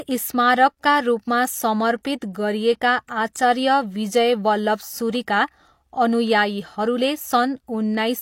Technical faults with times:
2.03 pre-echo

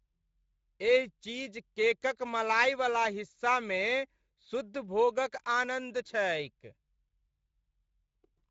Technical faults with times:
0.00-8.50 Speex codec

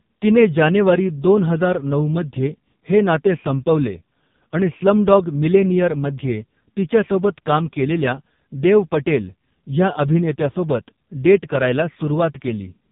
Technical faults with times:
0.00-12.91 AMR narrowband mobile codec

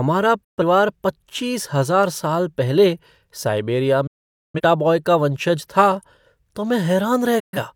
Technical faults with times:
0.44-0.63 digital broadcast dropout
4.07-4.60 digital broadcast dropout
7.39-7.58 digital broadcast dropout

